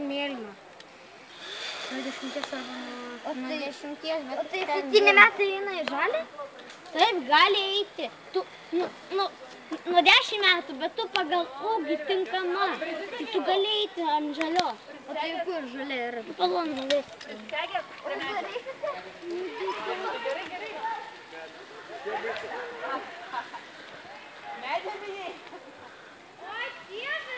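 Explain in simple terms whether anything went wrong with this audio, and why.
Nothing went wrong that I could hear: the audio came through an ordinary call connection, which keeps sound only up to 8 kHz, and on listening nothing stood out as a problem.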